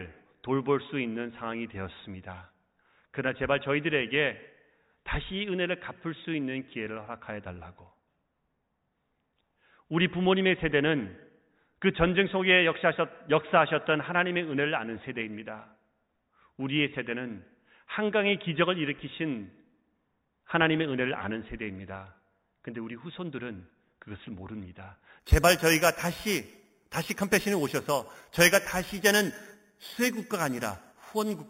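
From 25.2 s to the end at about 31.5 s, the speech picks up imaging from sample-and-hold upsampling. A bright, metallic fizz rides on top of it. The fizz rises and falls with the speech. The audio was raised in rate by repeating each sample, with no smoothing filter. The spectrum fits an 8 kHz original taken to 48 kHz. Mirror copies appear, the first filling 4 to 8 kHz, about 11 dB below the speech.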